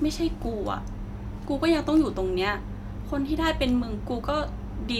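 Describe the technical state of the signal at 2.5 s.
At 2.5 s the speech signal is intact, with no fault audible at that moment.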